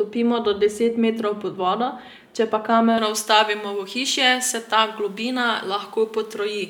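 A speech clip where, from about 2.98 s right through to the end, just after "pod vodo če pa", the top end suddenly jumps forward and everything turns thin, bright and hissy on the sibilants. That's pre-emphasis left on. The treble lift applied ahead of transmission never got its matching de-emphasis, so highs sit roughly 11 dB hot at 10 kHz relative to 1 kHz. The curve's shape fits J.17-style emphasis.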